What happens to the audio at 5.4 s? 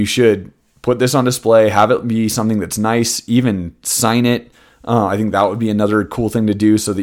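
Hard clipping from 5.38 to 5.44 s: speech peaks overdrive the stage by about 2 dB, leaving flat-topped waveform peaks, brief high-frequency spectrogram smears and a short crackle.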